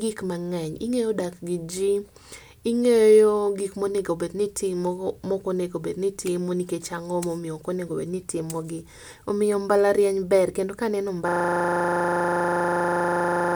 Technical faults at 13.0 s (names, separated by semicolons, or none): system hang loop